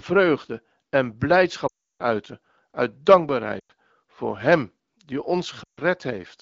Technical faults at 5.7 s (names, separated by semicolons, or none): lost AMR speech frames